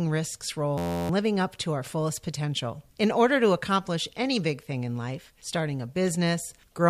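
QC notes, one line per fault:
0.78–1.09 s, system hang loop: the playback system stalls and the sound hardware keeps replaying the same ring buffer, so one 11.6 ms slice of speech repeats exactly, around 27 times. Because the loop is so short, the repetitions merge into a steady buzz at about 86 Hz rather than a stutter. That loop length fits a 512-sample buffer. Roughly a third of a second of the speech is lost behind the buzz.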